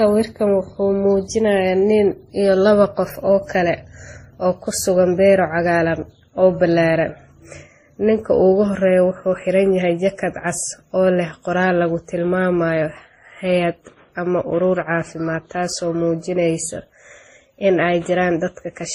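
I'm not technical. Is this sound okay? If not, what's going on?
No. The speech was likely re-compressed several times over, called transcoding between lossy codecs, so from start to finish the distortions pile up and the top treble is gone.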